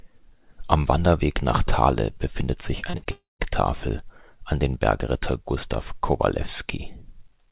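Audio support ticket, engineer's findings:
Repeated packet loss (robotic sound), 2.80 to 3.07 s. Choppy speech with bits missing. Four gaps, longest 47 ms, about 41% of the span concealed. Jitter buffer repeating the last audio into each hole, then losing the next packet.

Long network dropout, 3.11 to 3.41 s. Sound smears into a fading buzz, then about 0.16 s of silence before audio resumes, with roughly 0.28 s gone. Likely a network outage; concealment runs out. The call path is band-limited to 4 kHz, which fits G.711 A-law.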